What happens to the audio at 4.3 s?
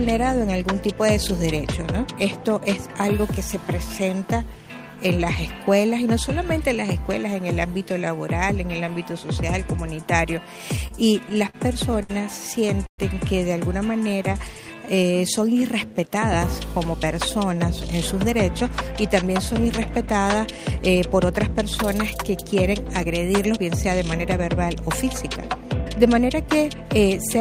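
Nothing goes wrong at 4.3 s; the audio plays through that moment intact, with no audible fault.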